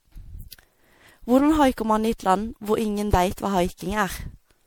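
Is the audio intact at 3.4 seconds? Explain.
No. At 3.4 s the speech carries generation loss, which runs throughout the clip. The sound is swirly, smeared and hollow, with consonant attacks blurred and nothing above 20.7 kHz. The likely cause is repeated lossy coding: a character consistent with MP3 around 96 kbit/s, decoded and re-encoded roughly seven times. Each pass quantises again on a shifted frame grid, so noise and spectral holes build up beyond what that bitrate alone would leave.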